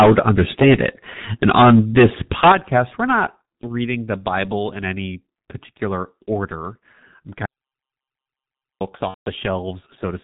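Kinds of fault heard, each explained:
G.723.1 codec, throughout: this 6.3 kbit/s telephony coder discards everything above 4 kHz and tracks the voice slowly, leaving speech muffled, hoarse and smeared at consonants.
Microphone overload, 0.00–0.89 s and 1.43–2.78 s: peaks driven about 16 dB past the converter's ceiling get flattened, likely from excessive input gain, giving loud syllables a harsh crackle.
Microphone volume stepped down, 2.52 s and 3.54 s: level drops abruptly by about 12 dB, then about 5 dB, likely the call software cutting input gain after the distorted peaks.
VoIP packet loss concealed by the speech codec, 9.08–9.30 s: 180 ms is missing, fitting six lost 30 ms frames; the decoder stretches the last sound with fading gain, then mutes it from the third lost frame.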